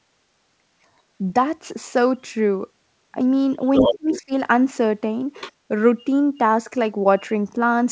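From 3.75 to 4.21 s a second voice comes through at roughly the same loudness as the talker, sitting directly on top of the main speech. This is the other side's voice leaking through. The far end is likely being played on the talker's loudspeaker and picked up again by the microphone, and the echo canceller left much of it in place. At that level the two voices compete on equal terms.

Overlapping that, from 3.9 to 4.32 s, the talker's own voice sinks sharply, at its deepest by something like 30 dB, across a few tenths of a second while the leaked voice plays. This is speech suppressed in double talk. With both sides sounding at once, the canceller likely could not tell the local talker from the loudspeaker echo, so it turned everything down together. The near voice drops away while it overlaps the echo and stays down a little past it.

At 5.34 to 5.51 s a fainter scrap of the other side's voice leaks through again, well below the talker. 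It is likely the same incomplete echo removal. Right after it, from 5.52 to 5.64 s, the room sound dips by about 18 dB for roughly a tenth of a second and then returns. This is background gated by the echo canceller: it clamped the microphone hard in response to the loudspeaker and then released it. The whole clip passes through a G.722 call path with nothing above 8 kHz, which gives every part a band-limited top end.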